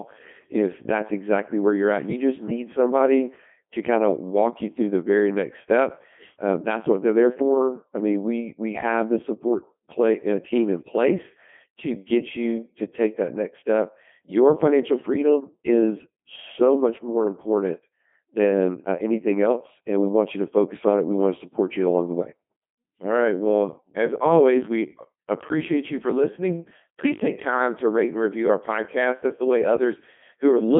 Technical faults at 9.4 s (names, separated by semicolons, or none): Codec 2 vocoder